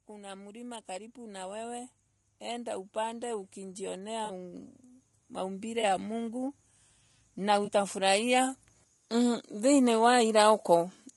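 Throughout the speech, the encoding has likely passed through low-delay AAC compression, AAC-ELD, at a rate that fits about 32 kbps. Its short analysis frames can't separate the pitch harmonics cleanly and leave too few bits for them, so the voice sounds plainly rough and grainy, with noise filling the gaps between harmonics and a thin, synthetic-sounding top band.

From 0.06 to 4.76 s, automatic gain rising occurs as the gain control judges the input too quiet and steadily turns it up by about 10 dB. Voice and background noise swell together across those several seconds rather than jumping.

Inside that rise, AAC frame loss with concealment hits from 4.25 to 4.30 s. About 40 ms of data, which fits two lost frames, never arrived, and the decoder filled the hole by extrapolating from the last good spectrum. The result is a brief smeared, noisy or phasey patch instead of clean voice.

A second gain rise runs from 5.35 to 6.59 s, lifting the level by about 3 dB. 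Within it, a 20 ms concealed frame loss at 5.81 s leaves a short blurred spot.

A third gain rise, about 4 dB, spans 7.46 to 9.96 s. Early in it, another 20 ms frame loss at 7.65 s is patched over, again heard as a momentary smeared, noisy blip.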